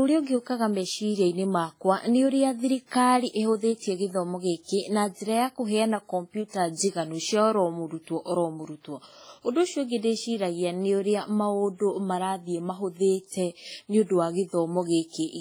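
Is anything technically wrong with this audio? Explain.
Yes. Throughout the speech, heavy WMA compression is likely at work. The transform coder quantises coarsely and zeroes weak spectral lines, so the voice sounds ringing and washy, with a hiss that swells and fades with the signal, which fits a low bitrate near 24 kbps.

From 6.48 to 6.53 s there is pre-echo. The codec spread quantisation noise meant for a sharp attack back across its block, filling the quiet moment before it. A short hiss lasting about 45 ms leads in, and the attack sounds smeared.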